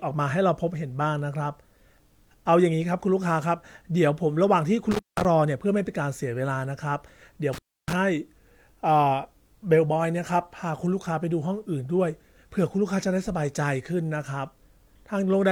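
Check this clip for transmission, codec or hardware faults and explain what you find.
The speech has one hardware fault: intermittent contact, occurring twice. At 4.91 to 5.25 s and again at 7.53 to 7.93 s, the sound drops out for about 180 ms and then 300 ms. A loose plug or cable briefly breaks the signal path. Crackle marks each break and reconnection, with faint hiss in the gap.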